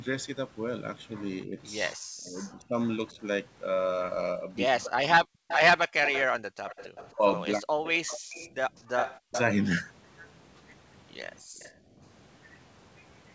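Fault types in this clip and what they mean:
Speech suppressed in double talk: The speech sinks sharply in four places: about 1.45 to 3.2 s, 4.46 to 5.48 s, 7.15 to 8.19 s and 9.17 to 9.35 s. The first dip is about 25 dB deep. The later ones reach about 40 dB, close to silence. The likely cause is an echo canceller facing both ends talking at once. It cannot separate this talker from loudspeaker echo, so it turns everything down.
Echo leak: A second copy of the speech trails the original by 324 ms. From about 5.48 to 9.4 s it sits roughly 10 dB below the speech. A fainter return, about 25 dB down, comes back around 11.34 to 11.72 s. This likely comes from a loudspeaker at the other end. Its canceller did not remove all that its microphone picked up, so part of the call travelled back.
Background gated by the echo canceller: The room sound dips twice while the loudspeaker plays. The first gap, around 6.46 to 6.58 s, is brief but deep, about 40 dB. 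The second, from about 11.42 to 12.01 s, lasts longer but drops less, about 20 dB. In both cases the canceller clamps the microphone hard during playback. The ambience returns as soon as the canceller releases.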